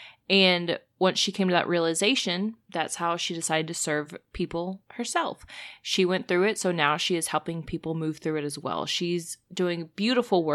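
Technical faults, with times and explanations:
No technical faults were found in the speech recording.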